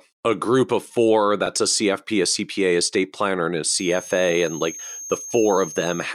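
From 3.62 s to the end, right after "state planner and a", a feedback whistle appears: a thin steady tone at 6.4 kHz, about 15 dB below the speech, swelling and fading slowly. It's likely a speaker-to-microphone loop held just short of runaway, drawn on a spectrogram as a flat horizontal line.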